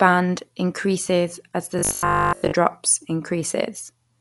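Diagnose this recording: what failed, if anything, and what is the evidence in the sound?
Across the whole speech recording the sound is dull and closed-in, with nothing above about 11.6 kHz and a rough, fluttering noise hanging around tonal parts of the voice. That points to the codec stage, most likely Dolby Digital compression at a low bitrate, which fits about 64 kbps: the encoder narrowed the band and starved many frequency lines of bits, so the decoder filled those gaps with noise, leaving plainly audible coding damage.

From 1.79 s to 2.55 s the voice turns into a rigid, metallic buzz at 50 Hz that still loosely follows the speech. This is robotic sound from repeated short buffers, a failure at the driver or buffer stage. New audio arrived too rarely, so a short slice, which fits a 20 ms buffer, was replayed over and over while real audio was dropped. Most of that stretch is repetition, and the repeat rate imposes the fixed pitch.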